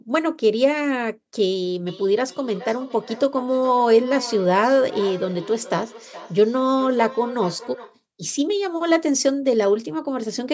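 From 1.87 s to 8.0 s the speech is caught in a feedback echo between two devices. A second device on the same call replays this microphone's signal into the room, the microphone picks it up again, and the local echo canceller cannot remove sound it did not play. Each phrase returns roughly every 400 ms, at most about 15 dB below the speech. On a spectrogram, faint copies of each syllable trail at that spacing, all cut off at 8 kHz by the call's microphone processing.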